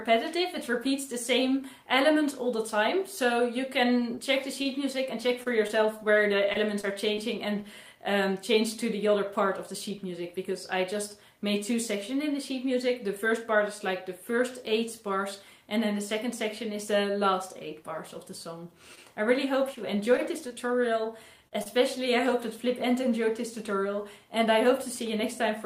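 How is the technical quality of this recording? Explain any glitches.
The recording has two stretches of scattered short gaps, at 3.99 to 7.19 s and 18.95 to 22.08 s. Each holds about seven small holes where packets went missing or arrived late, about 100 ms lost in the first and 80 ms in the second. The receiver filled each hole by extending the preceding sound, so the audio ticks or briefly smears. On a waveform the patches look like short flattened repeats. A spectrogram shows thin vertical seams with smeared, held harmonics.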